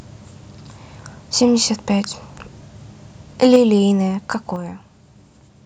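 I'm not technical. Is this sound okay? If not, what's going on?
No, not quite. From 3.42 to 3.56 s there's microphone overload: the loudest moment gets a harsh, crackly edge. It's likely the microphone's input was set too high, so the tops of the loudest peaks got sliced off, affecting a small share of that stretch.

Then at 3.56 s and again at 4.56 s the microphone volume stepped down: everything, voice and background alike, suddenly gets quieter in one jump. That's likely the call software noticing the overload and turning the microphone down in two quick notches.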